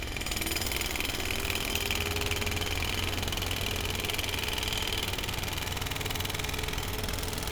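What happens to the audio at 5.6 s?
Nothing goes wrong at 5.6 s: the sound carries on intact through that moment, with no dropout, click or other fault.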